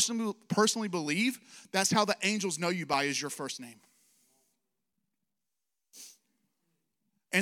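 Periodic USB or driver dropouts begin at 2.93 s, just after "the angels know you", and recur every 2.0 s until 6.93 s, about three events in all. Each time, something briefly stalls the USB path or audio driver, and a few milliseconds of speech never reach the recording; the gap is filled with silence. The result is a small, evenly spaced tick or pop cutting into the voice at each interval.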